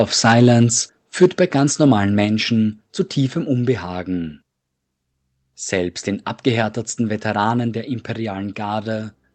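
From 1.22 to 1.26 s the loudest part of the speech turns harsh and crackly, with flattened, gritty peaks rather than a clean rise. This is microphone overload: the input level likely ran about 5 dB past what the converter could represent, so the tops of the waveform were sheared off, affecting roughly a fifth of the samples in that short stretch. The squared-off peaks add a buzzy distortion on top of the speech.

At 1.24 s, inside that same distorted burst, the speech and the room noise behind it both drop by about 2 dB in a single step and stay lower afterwards. This is the microphone volume being stepped down, likely because the call software reacted to the clipping it had just detected and cut the device's input gain all at once. Because the change is abrupt and not a fade, it can be heard as a small, sudden loss of presence in the middle of the crackle. The audio throughout carries the band limit of an Opus call link, with nothing above 8 kHz.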